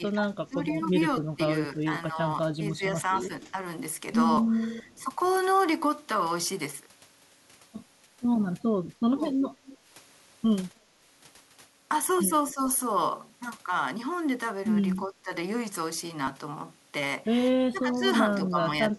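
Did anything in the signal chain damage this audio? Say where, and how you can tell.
Yes, the call processing stage. Speech suppressed in double talk dips the level by up to about 10 dB from 0.0 to 3.59 s, around 4.8 to 5.0 s, 12.54 to 12.6 s, 14.97 to 15.32 s and 17.73 to 18.95 s. The likely cause is an echo canceller that couldn't separate the near talker from loudspeaker echo and attenuated both.

Echo leak appears as faint delayed copies about 290 to 300 ms behind the speech, at 3.43 to 3.52 s, 4.83 to 5.05 s and 9.66 to 9.78 s, roughly 20 to 35 dB below it. This is likely residual loudspeaker pickup the canceller failed to remove and sent back.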